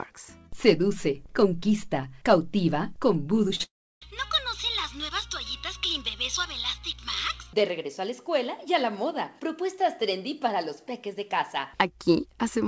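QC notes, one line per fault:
3.48–3.51 s and 3.55–3.61 s, short concealed packet loss. About 20 ms, then 40 ms, of audio arrived too late to decode. The receiver extended the preceding sound to cover each gap. Each gap is heard as a brief smear before normal sound resumes.
3.63–4.03 s, long network dropout. The gap lasts about 0.38 s. The held-over sound fades quickly, and the last 0.32 s is near-silence. The likely cause is a stall in packet delivery. Sound returns at 4.03 s with the lost stretch simply gone.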